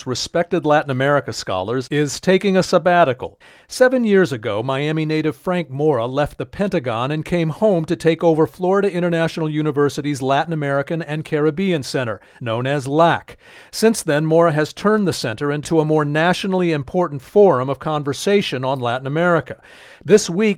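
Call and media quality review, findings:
No audible faults found.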